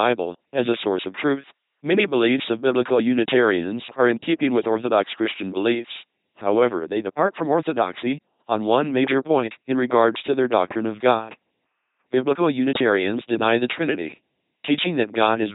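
From start to finish the speech runs through an LPC-10 vocoder, heavily degraded, with nothing above about 3.9 kHz. Each frame drives a short all-pole filter from either a pulse train or noise, so the voice becomes a buzzy, mechanical robot tone, with stray buzz or hiss where voicing is misjudged, consistent with 2.4 kbit/s.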